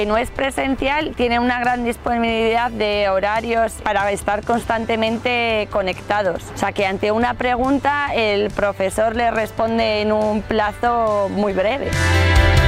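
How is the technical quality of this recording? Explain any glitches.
No glitches or faults heard.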